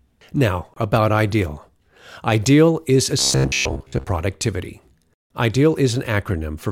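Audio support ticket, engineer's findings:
Robotic sound from repeated short buffers, 3.19 to 4.06 s. Speech turns to a rigid metallic buzz near 66.7 Hz, following the words only loosely. Likely buffer underrun: a segment of about 15 ms is replayed to fill gaps, and most of the real audio is skipped.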